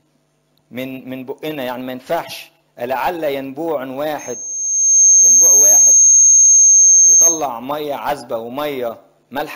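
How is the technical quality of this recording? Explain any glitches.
The recording has one clear technical fault: a loudspeaker feedback squeal from 4.18 s to 7.47 s. A microphone was picking up a loudspeaker it was feeding, and at about 6.4 kHz the loop gain went above unity. That frequency reinforced itself on every pass, swelling over roughly a second into a piercing, steady tone that stands about 15 dB above the rest of the sound before cutting off at 7.47 s.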